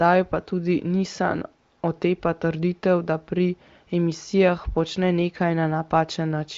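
No technical faults can be heard in this speech clip. It has passed through the AMR wideband (HD Voice) codec at a high rate of about 23 kbit/s, so the content stops at around 7.6 kHz, and any coding damage is faint at most.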